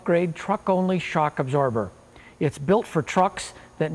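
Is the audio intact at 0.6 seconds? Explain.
Yes, the audio is intact at 0.6 seconds, with no fault audible at that point.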